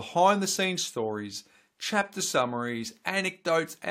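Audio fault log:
No faults heard anywhere in this speech recording.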